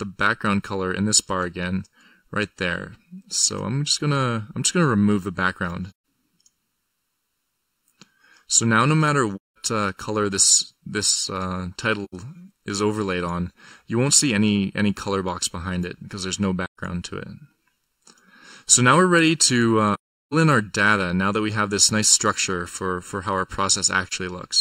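The audio sounds hollow and phasey throughout, from channel delay (comb filtering): one channel lags the other by under a millisecond, so the mono sum cancels at evenly spaced notches starting around 700 Hz. Soft-edged dropouts occur at 5.91 s, 9.36–9.56 s, 12.04–12.14 s, 16.65–16.79 s, 19.94–20.34 s and 24.07–24.13 s. These are AAC frame loss with muting, where the decoder zeroed lost frames and the overlapping windows faded the sound out and back in.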